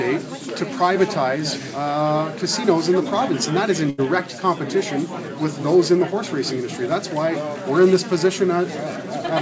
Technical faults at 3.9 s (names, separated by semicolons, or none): burst of packet loss